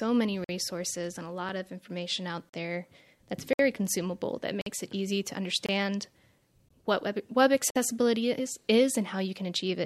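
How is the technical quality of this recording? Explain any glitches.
The speech is broken by short, hard-edged dropouts into silence at 0.44–0.49, 2.49–2.54 (after "of information out"), 3.53–3.59 (before "consumable that"), 4.61–4.66, 5.66–5.69, 6.69 (before "what web web") and 7.70–7.76 s. These are gaps between stream segments: roughly once per second, fitting 1-second segments, adjacent timestamps fail to meet and the player fills 20–60 ms with silence. Nothing is lost; the sound simply stalls.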